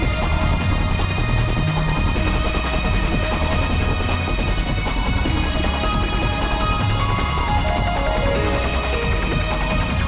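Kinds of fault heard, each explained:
No faults are present; the audio has come through a call path whose content stops at 4 kHz, which fits a narrowband telephone codec such as G.711 mu-law.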